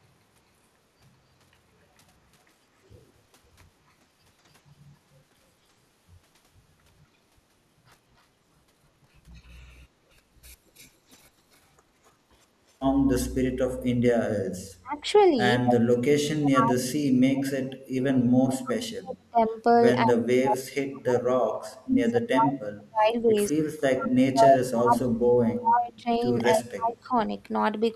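At 10.78, 15.2 and 15.65 s, echo leak: a copy of the speech returns exactly 201 ms late, faint at first, nearly as loud by 15.65 s. The fixed lag, unlike diffuse reverberation, points to loudspeaker pickup the canceller likely missed.

At 14.82 to 15.35, 15.94 to 19.58, 20.04 to 23.54 and 23.91 to 27.14 s, speech suppressed in double talk: the speech ducks while the other side talks, by about 15 dB at first and then very deeply. The likely cause is the canceller turning down both talkers.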